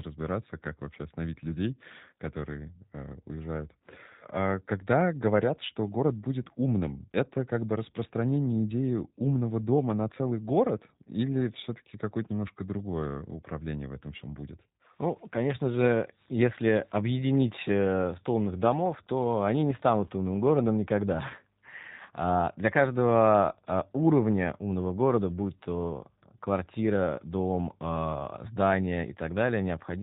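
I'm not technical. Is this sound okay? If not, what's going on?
No, not quite. The whole recording has been squeezed through the G.729 codec, a phone-call format that rebuilds speech from a rough model of the voice. Everything above about 4 kHz is gone, so it sounds muffled, slightly rough and a bit robotic throughout.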